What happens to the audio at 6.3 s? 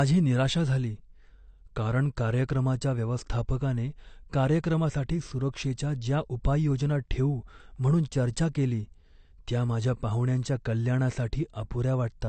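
At 6.3 s the speech carries the same damage it has from start to finish: it has likely passed through AAC compression at a low bitrate, something near 32 kbps. To save bits, the encoder discards everything above about 8.6 kHz and coarsely quantises the remaining frequency lines, leaving gaps that shift from frame to frame. So the voice sounds dull and smeared, with a plainly audible warbling, fizzy texture on sustained sounds and sibilants.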